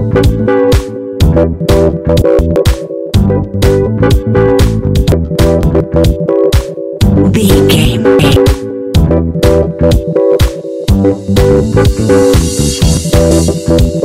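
Hard clipping runs throughout: peaks are driven about 7 dB past full scale, so around one sample in twenty is cut flat, giving a harsh fuzz on loud passages. Chunks out of order appear at 2.22–2.56 s, 5.12–5.80 s, 7.85–8.36 s and 12.97–13.48 s. Blocks of about 171 ms play one to three places late, producing jumbled moments.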